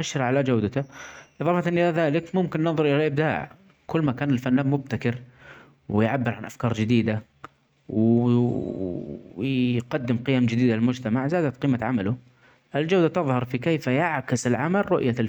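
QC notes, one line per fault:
No faults found.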